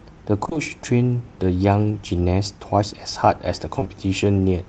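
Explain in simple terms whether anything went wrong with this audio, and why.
Two brief smears interrupt the speech, from 0.45 to 0.57 s and from 3.79 to 3.87 s. This is short concealed packet loss: bits of the call arrived too late, so the receiver stretched out the previous sound to cover each gap before rejoining the real audio.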